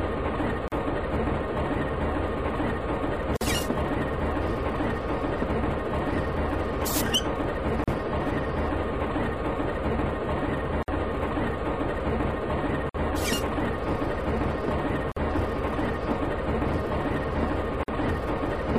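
Silences of 38 to 52 ms break the sound at 0.68, 3.37, 7.84, 10.83, 12.89, 15.12 and 17.83 s. These are gaps at a join of encoded pieces. Encoder delay and frame padding remain at each join. The codec smears the edges. The sound resumes where it stopped.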